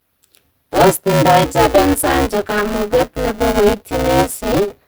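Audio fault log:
throughout: Opus compression, likely at a low rate in its hybrid speech mode. Speech sounds hoarse, grainy and muffled, though the bandwidth stays fullband. A spectrogram shows noise-filled, smeared upper bands rather than sharp harmonics, with few empty holes.
throughout: buffer tearing. A robotic buzz at 200 Hz rides on the speech and vanishes in silence. Most of each period is replaced by audio about 10 ms old, hard-joined at both ends. The waveform shows abrupt steps every 5 ms, and a spectrogram shows vertical lines at that rate.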